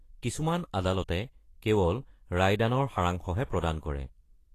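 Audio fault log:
throughout Vorbis compression. Treble above 14.2 kHz is absent, and upper frequencies sound hissy and grainy. Consonant onsets are blurred. Fine high detail has turned to noise of similar energy. The damage is plainly audible, likely from low-rate encoding near 35 kbps.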